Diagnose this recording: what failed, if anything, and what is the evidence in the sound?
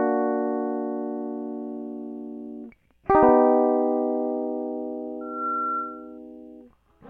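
The fault is loudspeaker feedback squeal at the acoustic and analogue stage. A microphone was picking up the loudspeaker it feeds, and around 1.4 kHz the loop gain climbed past unity. From 5.21 s a steady 1.4 kHz tone rises out of the music, swelling over roughly a third of a second until it sits at about the same level as the music. The squeal holds until 6.18 s.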